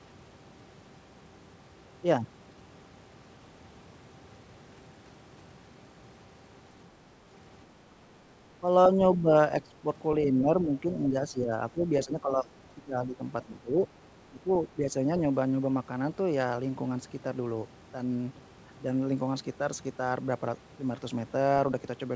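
Speech that is pulled down by about 10 dB in patches at 8.61–9.29 s, 9.65–9.85 s, 10.24–13.81 s (about two seconds affected) and 14.31–14.95 s. This is likely speech suppressed in double talk. Unlike packet loss, the voice dips in level.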